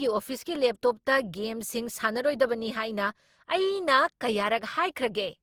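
Across the whole speech clip there is generation loss: a swirly, hollow, smeared quality, with consonant attacks blurred and a watery texture that is heavier than a single lossy pass would leave. The likely cause is the audio being decoded and re-encoded about three times, each pass quantising on a shifted frame grid so noise and spectral gaps accumulate. The character fits an Opus chain around 48 kbit/s, and the spectrum stops at about 20.2 kHz.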